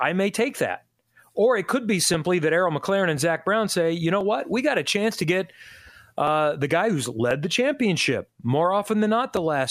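From 1.11 s to 9.37 s the speech carries a regular click, recurring about every 1.03 s, roughly ten times in all. These are clock drift buffer slips, likely from two devices running on independent clocks that disagree by something near 700 ppm. The buffer between them drifts until a small block, which fits a slip of around 30 samples, is dropped or repeated, leaving a brief discontinuity in the waveform.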